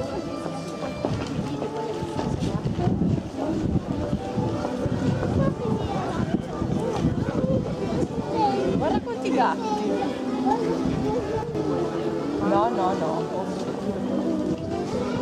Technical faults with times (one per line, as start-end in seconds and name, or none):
11.43-11.55 one channel drops out
14.55-14.71 one channel drops out